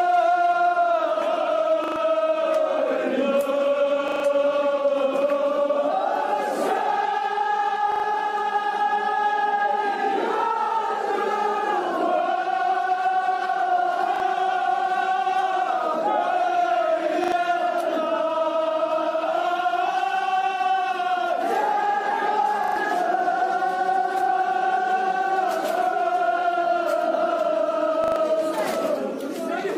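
Repeated buffer at 1.84, 4.08, 7.92, 14.16, 17.24, 22.64 and 28.04 s: late audio forced the same short chunk to replay, producing hard-joined stutters that fit a 40 ms buffer.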